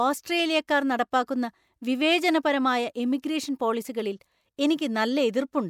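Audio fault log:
0.67 s and 3.22 s, pre-echo: each sharp speech onset is preceded by a brief hiss, about 12 ms before the first and 14 ms before the second, and the attack itself sounds softened and smeared. A transform codec spread the quantisation noise evenly across a block in which a quiet stretch came before a loud attack, so noise sized for the attack also filled the silence just ahead of it.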